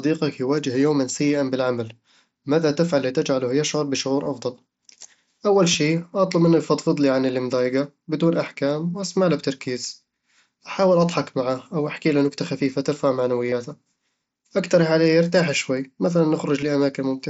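Speech carrying concealed Bluetooth headset packet loss at 4.23–4.26 s (after "ماذا تفعل لتجعله يشعر"), 5.73 s, 13.50–13.52 s (after "أحكيله نكتة خفيفة ترفع") and 16.61 s. Lost audio is patched with a repeated recent waveform, so the single lost frame at 5.73 s is nearly hidden, while the runs of two and three lost frames become a brief buzzy tone at full level rather than a silent dropout.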